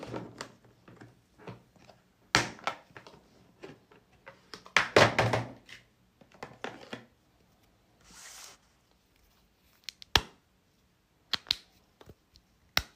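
No technical faults are audible anywhere in the recording.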